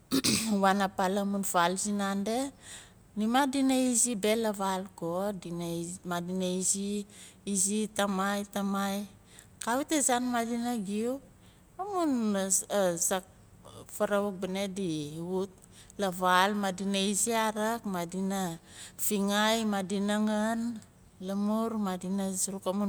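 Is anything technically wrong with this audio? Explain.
No, nothing technically wrong.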